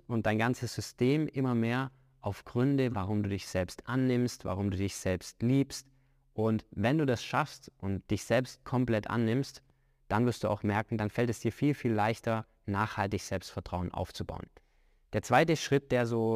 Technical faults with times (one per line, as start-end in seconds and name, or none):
0.00-16.35 crude rate conversion